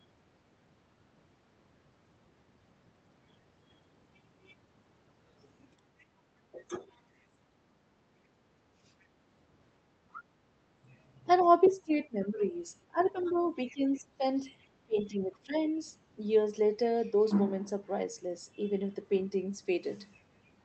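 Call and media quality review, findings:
Other side's voice leaking through: brief faint scraps at 5.99, 9.01 and 10.13 s, then a fairly strong stretch 11.41–14.0 s. Likely residual echo the canceller left in the mic feed.

Speech suppressed in double talk: talker ducks around 15 dB at 6.52–6.85 s, and around 20 dB in pieces over 11.43–15.55 s. Likely the canceller choking while both sides talked.

Background gated by the echo canceller: room tone drops about 12 dB, about half a second in total, between 7.9 and 8.82 s. Canceller clamping the mic during far-end playback.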